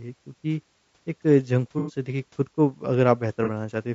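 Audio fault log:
Throughout: low-delay AAC compression. The speech has a rough, grainy texture, with noise filling the gaps between pitch harmonics and a thin, synthetic-sounding top band. The damage is plainly audible. The likely cause is the AAC-ELD codec used in video calls, at a rate that fits about 32 kbps. Its short frames of roughly 30 ms cannot separate closely spaced harmonics well, and at this bitrate too few bits remain to code the spectrum cleanly.
1.79–1.93 s and 3.44–3.49 s: AAC frame loss with concealment. Each gap is heard as a brief smeared, noisy patch rather than a dropout. The decoder fills the missing audio by reusing the last good spectrum with altered phase or interpolated energy. The first gap is about 90 ms of lost audio, which fits three consecutive frames, so the patch is longer. The second is about 30 ms, consistent with a single frame, and passes as a short blur.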